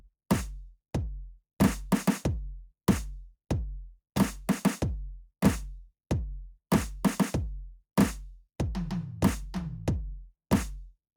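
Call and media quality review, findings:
No findings in this call and media quality review; nothing in the music calls for a ticket.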